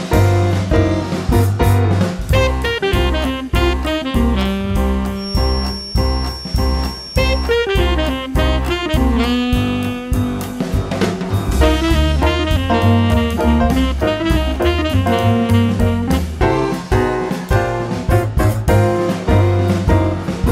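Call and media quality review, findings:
Feedback whistle, 5.12–7.56 s. A thin 5.5 kHz tone, slowly swelling and fading, sits well under the signal. Likely a speaker-to-mic loop held at the feedback edge.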